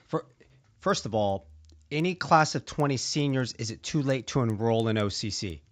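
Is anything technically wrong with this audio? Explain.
Yes. There's a steady ticking running through the whole speech clip, about ten ticks a second. It's the resampler restarting on every block: each 100 ms chunk was converted on its own, which fits a 16 kHz to 48 kHz upsample, so at every chunk edge the filter had no real neighbouring samples to work with and left a small error. Those errors repeat at 10 Hz and you hear them as a regular tick riding along with the speech.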